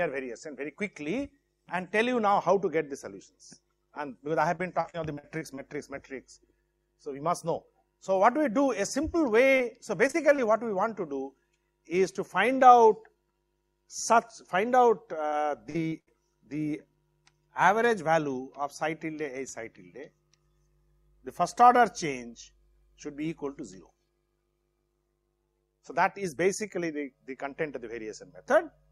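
Repeated packet loss (robotic sound) breaks up the audio at 4.55–5.59 s, 9.57–10.40 s and 15.28–16.09 s. In each stretch, packets went missing or arrived late in quick succession, and each hole was bridged by extending the last received sound. That gives a choppy, robotic texture with fragments lost. About a fifth of the first and third stretches is patched, with holes up to 41 ms and 70 ms long. The second stretch has about a tenth patched, with holes up to 32 ms.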